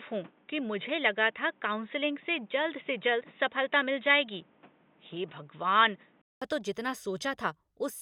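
An input switched to a poorer device runs from the start of this speech clip to 6.42 s. For that stretch the sound is dull and boxy, with nothing above 3.8 kHz and a background noise sitting roughly 35 dB under the signal. At 6.42 s a gap of 200 ms is followed by fuller, clearer audio about 5 dB different in level, just before "तो जितना". This is likely a change of input, such as a headset call profile giving way to a better microphone.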